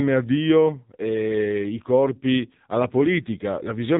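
From start to end the speech carries AMR narrowband mobile codec damage: nothing survives above 4 kHz, so a spectrogram shows a hard ceiling there, and the low bit budget, which fits the 7.4 kbps mode, makes the voice plainly buzzy and synthetic.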